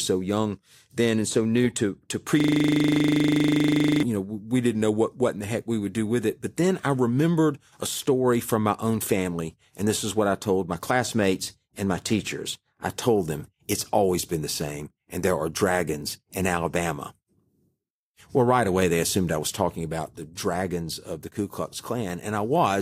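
The system froze from 2.40 to 4.03 s, a system hang loop replaying a 40 ms buffer, heard as a steady 25 Hz buzz.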